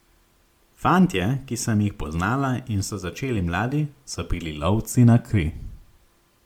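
Speech with generation loss throughout: a swirly, hollow smear and blurred consonant attacks, with nothing above 19.9 kHz. That is worse than a single MP3 pass near 134 kbit/s would sound, so it is likely the result of about ten repeated encodes, each adding fresh artefacts.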